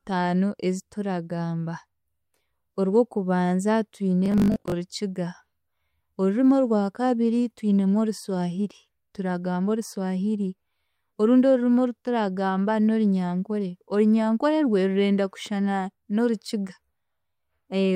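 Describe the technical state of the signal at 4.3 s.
At 4.3 s the speech has robotic sound from repeated short buffers, from 4.26 to 4.74 s: a metallic 50 Hz buzz, likely from 20 ms chunks repeating over roughly half the audio. The waveform shows identical repeating cycles, and the spectrogram shows rigid harmonic stripes spaced 50 Hz apart.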